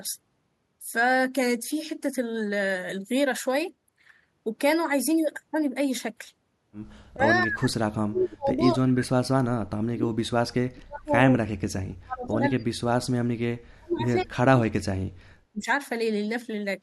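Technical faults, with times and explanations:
7.1–11.18 s, 11.39–13.18 s, 13.69–15.36 s and 15.53–15.68 s, speech suppressed in double talk: The speech falls away deeply, nearly to silence. The short last one dips less deeply, by about 15 dB. An echo canceller likely turned the talker down while both sides spoke at once.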